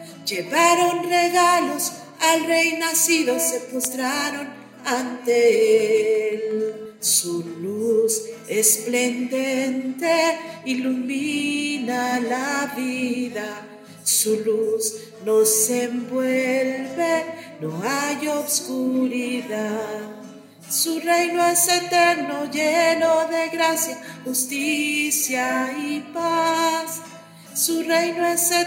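From 5.80 to 6.70 s there's a train of clicks: about seven similar ticks at a steady 5.6 per second, peaking at roughly the level of the sound itself. That regular pulsing likely comes from nearby equipment interference or a faulty connection or power supply.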